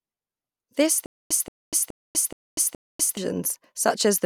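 From 1.06 s to 3.17 s, the speech stutters with silent gaps: a 177 ms fragment repeats five times at a steady 422 ms period, each separated by 246 ms of dead digital silence. The audio in between is lost, likely because a stalled player or stream kept replaying its last buffer before running empty.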